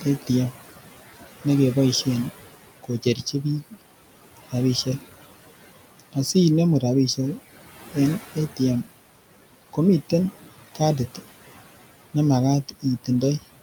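Throughout, a noise suppressor pulls steady background down by about 16 dB frame by frame, leaving residual noise that sinks between words and rises under them. At 2.83–3.44 s and 12.69–12.85 s, it mistakes speech for noise and cuts it by up to about 12–13 dB, so short fragments sound swallowed and faint.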